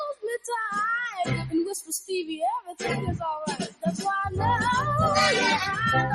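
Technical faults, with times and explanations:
Throughout: noise suppressor applied to music or sounds. A suppressor built for speech stays active on non-speech material. It treats steady tones and fading tails as noise and pulls them down. The level swings by around 10 dB, so the sound pumps and thins while sharp onsets pass.
1.08–1.23 s, 2.59–2.84 s, 3.51–4.05 s: sound cut by the noise suppressor. Each span sinks below its surroundings, by about 9 dB in the first and about 17 dB in the other two. The suppressor judges held or fading sound as noise, so it drops or decays early.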